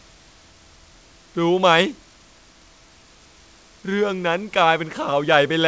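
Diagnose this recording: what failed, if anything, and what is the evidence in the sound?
Nothing has failed here as far as I can hear: the speech comes through the G.722 call path with its band stopping around 8 kHz, as that codec's design dictates, and the faint room noise sitting about 39 dB below the speech belongs to the space the microphone was in rather than to any stage of the system.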